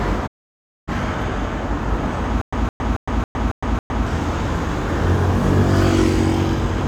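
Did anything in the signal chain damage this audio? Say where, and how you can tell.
Yes. A digital broadcast dropout at the reception and decoding stage: from 0.26 s to 0.93 s the sound fades out over about 20 ms and goes silent, returning later in the material. Roughly 0.6 s is missing, as the receiver muted when incoming frames failed their checks.

A stutter with silent gaps from 2.41 s to 4.06 s, likely a playback buffer stall. The same 164 ms fragment repeats six times at an even 275 ms period, each followed by 111 ms of digital silence, so each retry replays the last chunk and then runs empty, losing the intervening audio.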